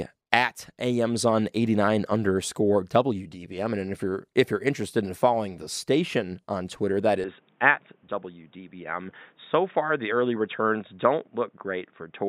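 Speech turns dull from 7.24 s on, likely an input switched to a poorer device; the spectrogram goes empty above 3.8 kHz, without any gap.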